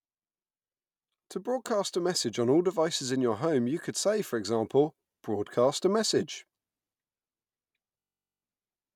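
From 8.0 to 8.43 s, a system hang loop replays one 21.3 ms slice 20 times. It sounds like a 47 Hz buzz, with identical waveform cycles and evenly spaced spectrogram harmonics.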